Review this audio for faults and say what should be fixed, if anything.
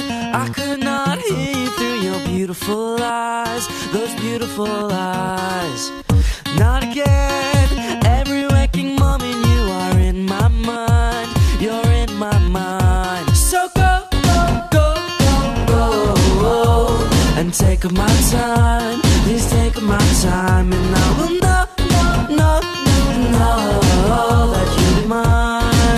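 Overlapping time stamps between adjacent 4-second stream segments cause an overlap between stream segments at 21.00 s and 24.98 s. The player trims audio that was never actually duplicated, so about 6 ms of sound vanishes each time and the waveform jumps, heard as a brief click or skip. To prevent this, segment time stamps should come from one continuous clock so each segment starts exactly where the previous one ends.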